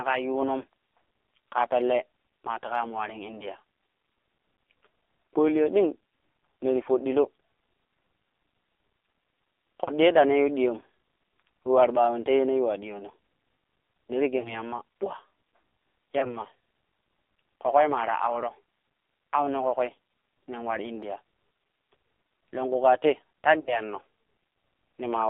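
From the start, the whole recording carries the sound of the AMR narrowband mobile codec. The speech is confined to roughly 300 Hz to 3.6 kHz. On a spectrogram this shows as a hard ceiling with nothing above it and a thin floor below. The coding damage is heavy. Voiced sounds have a buzzy, synthetic edge, which fits a very low bitrate around 5.9 kbps. The harmonics look smeared and blotchy instead of cleanly striped.

Four times speech frames are lost to radio errors, and the decoder fills each gap by repeating its last pitch and vocal tract settings at falling gain. This happens at 9.84 to 9.91 s, 14.40 to 14.55 s, 16.20 to 16.37 s and 23.60 to 23.79 s. Each one is heard as a brief smeared dip or warble, and the speech returns weak or rough for a moment afterwards. The concealed stretches are about 40, 40, 20 and 60 ms long, which fits two, two, one and three lost 20 ms frames. On a waveform each shows as a decaying, oddly regular patch. 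On a spectrogram the harmonics freeze flat and then fade before normal detail resumes.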